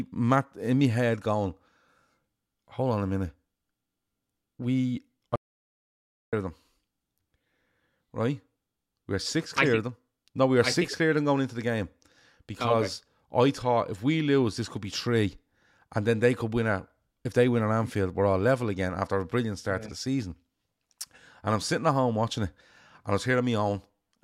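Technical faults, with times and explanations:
5.36 to 6.33 s, audio dropout to silence: the speech stops abruptly mid-flow and returns just as abruptly after about 0.97 s. The gap is fully silent, with no room tone or background carrying through. That points to the input itself being lost while recording or encoding continued and wrote silence in its place, likely through a disconnected device, a failed link or a stray mute. Whatever was spoken during that second is missing.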